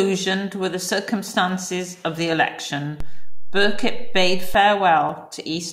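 A DC step hits this speech recording at 3.00 s: the waveform's zero line suddenly jumps by about -18 dBFS, holds at that offset, and drops back at 4.54 s. Each jump is a near-instantaneous shift in the signal's baseline, so each transition comes through as a low thump or click while the speech continues unchanged on top of the displaced level. Such a jump points to a converter recalibrating mid-recording or an offset-carrying input being switched into the path.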